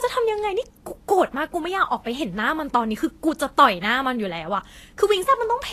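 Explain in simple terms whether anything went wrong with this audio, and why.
Across the whole recording, from start to finish, the speech sounds grainy and hissy, with consonants smeared and a rough, fizzy edge on the treble. Nothing reaches above about 14.2 kHz. The likely cause is Vorbis compression squeezed too hard: the fine high detail is replaced by noise of similar loudness. A simple treble cut would sound dull but clean; here the top end is still present, just gritty.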